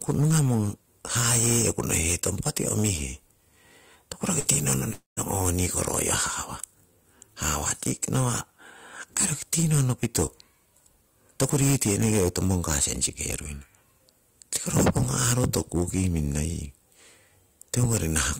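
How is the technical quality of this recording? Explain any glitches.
The technical quality is poor, with constant distortion and two brief gaps in the speech.

Hard clipping runs through the whole clip. The speech is overdriven by about 20 dB, so a few percent of peaks are sliced flat, giving a harsh fuzz on every loud syllable rather than occasional crackle.

A burst of packet loss sits between 4.39 and 4.48 s. About 60 ms never arrived, so the receiver stretched the last sound over about 53 ms, fading it out before the speech skips ahead.

At 4.93 to 5.20 s, the last sound is held and fades, then falls silent for about 0.15 s and resumes with roughly 240 ms missing. This is likely a long network dropout. The true silence, which the shorter burst lacks, is what sets it apart.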